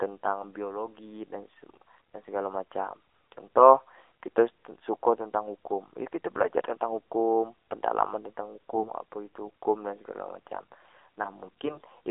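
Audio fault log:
Throughout: AMR narrowband mobile codec. The band runs only from 300 Hz to 3.6 kHz, so the speech sounds thin and boxed in. Coding damage is plainly audible: the voice is buzzy and synthetic, which fits the low 7.4 kbps mode.
11.66 to 11.89 s: AMR bit errors. For about a quarter second the voice keeps its pitch and level but turns hoarse and gargly. Flipped bits, which fit roughly one in fifteen, misplace the excitation pulses across about a dozen 20 ms frames.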